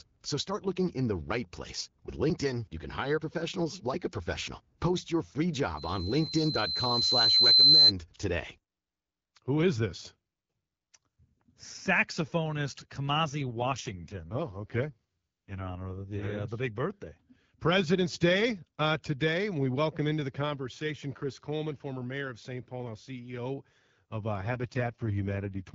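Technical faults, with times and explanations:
5.76 to 7.92 s, loudspeaker feedback squeal: just after "your free" a single tone near 4.1 kHz swells over about two seconds to roughly 15 dB above the speech. A microphone is hearing its own loudspeaker, and at that frequency the loop gain tops one. It is a steady growing pitch, not broadband noise or distortion of the voice itself.
13.48 to 16.38 s and 24.35 to 25.74 s, AMR rate drop: the wideband codec falls from 12.65 to 6.6 kbit/s, so the speech turns rough, buzzy and synthetic, ending just before "uh the big birthday" in the first case. The bandwidth stays the same and nothing drops out, which separates it from packet loss or a switch to narrowband. The codec has far fewer bits for its vocal tract model, and the coarse pulse excitation is what gives the raspy texture. Outside these spans the AMR-WB path at 12.65 kbit/s leaves only light coding texture.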